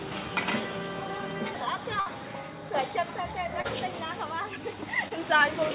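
At 2.0 s there's a burst of packet loss running to about 2.08 s. A stretch of packets never arrived in time, so the receiver kept the last bit of sound going for about 57 ms and faded it down. You hear a held buzz or fading hiss where the audio should be moving. When it picks up again, about 60 ms of the original has simply been skipped, so the sound jumps ahead.

Later there are two short concealed packet losses, at 3.62 to 3.66 s and 5.08 to 5.12 s. Each time about 20 ms of audio went missing, and the receiver patched it by extending the preceding sound for roughly 25 ms and 22 ms, then blending back into the real signal. They come across as a quick smear or wobble, and a brief sound right at that spot can drop out. The whole clip also stops at 4 kHz, which fits a G.711 mu-law call path at 64 kbps.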